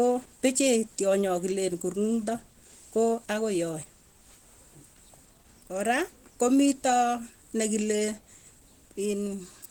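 Throughout, the speech sounds plainly hoarse and grainy, likely from Opus compression in hybrid mode at roughly 16 kbps, though the bandwidth stays full.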